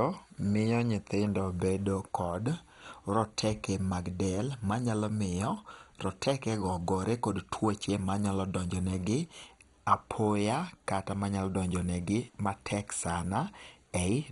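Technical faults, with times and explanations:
Throughout, MP2 compression: speech sounds dull and gurgly, nothing above 11.2 kHz, heavy granular distortion. Likely a low bitrate, perhaps 56 kbps, starving upper sub-bands.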